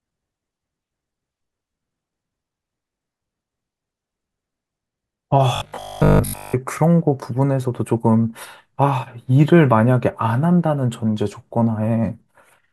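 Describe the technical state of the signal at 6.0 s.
At 6.0 s the speech has become a rigid, metallic buzz pitched at 50 Hz, still loosely tracking the syllables, from 5.56 to 6.58 s. This is robotic sound from repeated short buffers. The likely cause is audio arriving too seldom, so the playback fills the gaps by looping the last fragment of about 20 ms, whose repetition imposes the fixed 50 Hz tone. Roughly 70% of the span is repeated material, with the real audio in between skipped.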